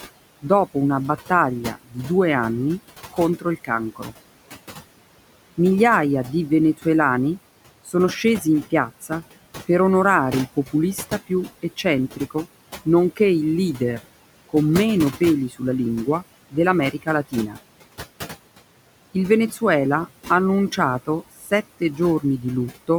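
Throughout this speech clip the background pumps: between phrases the room noise, which sits about 16 dB below the voice, sinks away, then swells back under each phrase. These are noise suppressor artifacts. Frame by frame, a suppressor pulls down every band it judges to be steady noise by about 17 dB, so the noise floor rides up and down with the speech.

The same processing also swallows parts of the voice. Parts of the speech turn faint at 1.29–1.97 s, 3.13–4.13 s (right after "due anni"), 7.85–9.11 s (after "di venezuelani", before "per onorare il"), 10.56–13.2 s (after "per onorare il"), 15.2–17.57 s and 20.77–22.24 s. Within each span the missing sound totals only a fraction of a second, from around 150 ms to about 400 ms. This is speech cut by the noise suppressor. It mistook soft, low-level speech for background and turned it down by about 10 to 17 dB.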